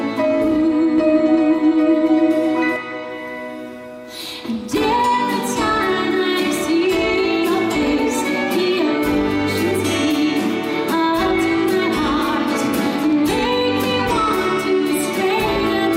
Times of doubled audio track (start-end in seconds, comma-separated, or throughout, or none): 0.98-2.76